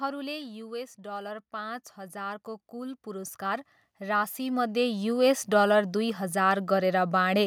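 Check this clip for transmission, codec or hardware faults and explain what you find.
Two gain faults show up back to back, both from the automatic gain control hunting for a level.

From 0.05 to 0.9 s there's automatic gain falling. The AGC decided the input was too hot and eased its gain down by about 4 dB over that stretch. You hear the speech start out loud and then sag a little, with the background noise dropping right along with it, which is the giveaway that it's gain and not the talker backing off.

Then from 0.96 to 7.22 s you get automatic gain rising, and it's much bigger. The AGC judged the signal too quiet and slowly wound its gain back up, by about 18 dB across those six-odd seconds. The speech and the room noise swell together in one long, steady ramp, so the level keeps creeping up under the talker instead of sitting still.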